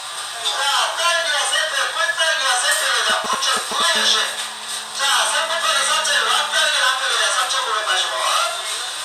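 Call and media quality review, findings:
GSM signalling bursts, 3.10 to 3.82 s: nearby 2G handset sending short radio burst groups, rectified in the audio circuit; galloping ticks and brief 217 Hz buzzes, nearly as loud as the sound.

GSM phone buzz, 3.96 to 6.68 s: handset in a call transmitting continuously at 217 bursts per second, demodulated by the audio path; steady raspy harmonic buzz about 21 dB below the sound.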